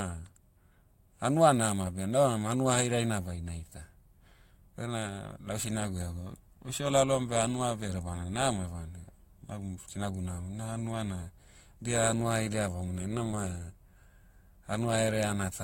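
At 13.31 to 13.36 s the speech shows a short concealed packet loss. About 20 ms of audio failed to reach the decoder in time, and the receiver covered the gap by extending the preceding sound for around 11 ms, carrying its pitch forward if voiced or substituting shaped noise if not, then crossfading back into the real signal. Roughly 10 ms of synthetic audio results, heard as a brief smear or wobble in the speech.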